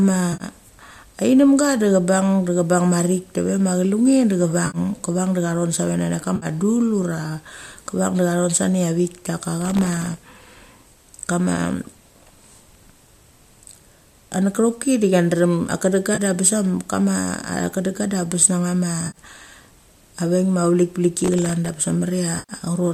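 At 0.33–0.44 s, 4.67–4.78 s and 6.36–6.46 s, the speech turns into a brief smeared, noisy patch of 60 to 70 ms. This is AAC frame loss with concealment: frames dropped out and the decoder filled the gap from the last good spectrum. From 9.62 to 10.50 s a gritty crackle rides over the speech. This is processor overload crackle, where dozens of very short buffers, each well under a millisecond, missed their deadlines and left hard-edged silent gaps. Right after "a chedenga", a 30 ms concealed patch at 16.15–16.20 s is the same frame loss, as is the 70 ms smear at 19.07–19.18 s. After "a veik ma", crackle returns from 21.19 to 21.74 s for the same reason. At 22.39–22.53 s the longest concealed loss, 100 ms, leaves a smeared, noisy stretch. Around all of this, a light graininess in the speech likely comes from low-delay AAC compression.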